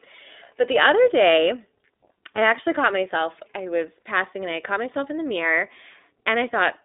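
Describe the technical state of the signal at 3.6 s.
At 3.6 s the speech carries iLBC codec damage, as it does throughout: independently coded 20 ms frames sound rough and synthetic, and the spectrogram shows nothing above 3.8 kHz.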